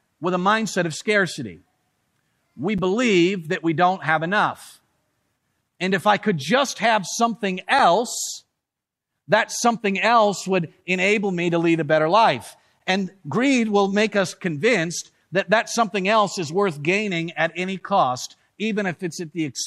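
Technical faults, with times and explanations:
2.78 s and 7.79 s, gap between chunks: the speech drops out twice, each time as a brief hole of about 6.5 ms with abrupt edges, exactly 5.0 s apart. This is silence inserted where separately delivered or stored blocks of audio meet, consistent with 5-second chunks and each new block starting slightly late, from padding or delayed playback. Nothing is removed from the recording; the flow of sound is simply broken at each join, giving a tiny, sharp-edged interruption.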